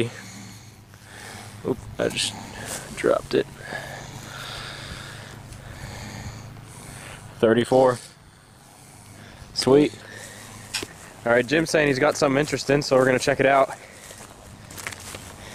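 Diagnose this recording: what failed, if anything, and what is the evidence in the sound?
Frame-based processing left overlap-add ripple: mismatched windows make the level pulse about 6 dB near 100 Hz from 0.71 s, a metallic buzz.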